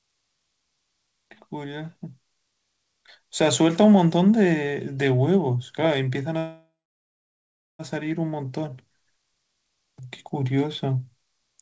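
Speech, carried over a call link whose sound stops at 8 kHz, which fits a wideband G.722 codec at 64 kbps. At 6.38 s there is a call audio freeze lasting to 7.82 s. The last sound is stretched into a fading buzz or hiss, then about 1.09 s of near silence. The likely cause is packets stalling in transit until the jitter buffer ran dry. When they arrive, the speech resumes where it stopped. Nothing is lost, but everything after comes about 1.41 s late.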